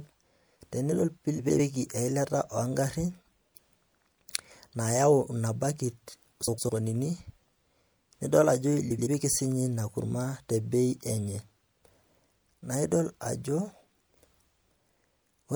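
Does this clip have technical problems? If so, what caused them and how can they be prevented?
Yes. This speech has frames out of order at 1.38–1.60 s, 6.47–6.70 s, and 8.90–9.07 s (between "nidol ajo" and "sii ninye"). Adjacent blocks of about 104.5 ms, and 78.4 ms in the last case, play swapped, giving a garbled flutter but no lost time. Sequence-numbered packets with a reordering jitter buffer prevent this.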